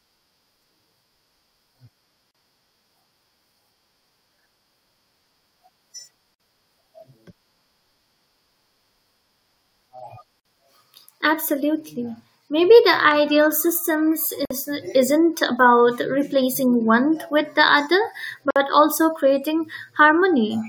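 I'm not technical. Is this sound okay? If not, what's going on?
No. There is a gap at a join of encoded pieces at 2.31, 6.35, 10.40, 14.45 (just before "isn't about") and 18.51 seconds: the speech was saved in four-second chunks joined untrimmed, leaving 34 to 53 millisecond silences.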